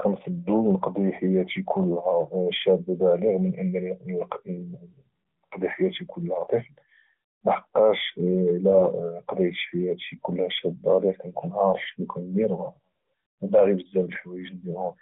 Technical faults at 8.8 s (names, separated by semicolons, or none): AMR bit errors